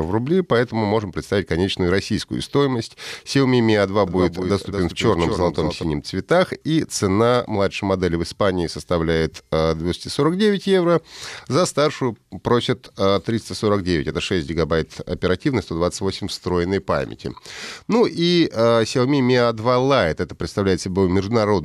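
A doubled audio track runs from 4.07 to 5.83 s, ending just before "цветах и цена младшей". A second, dry, full-band copy trails about a fifth of a second behind, roughly 5 dB quieter, and starts and stops abruptly, likely from a slower duplicate capture path.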